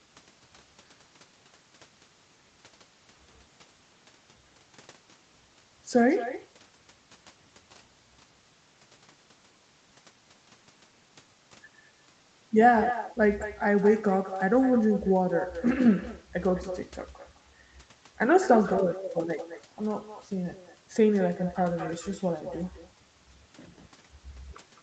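Throughout, an echo with no canceller trails the speech by about a fifth of a second at about 12 dB down: a distinct, thinner repeat rather than smooth room reverberation.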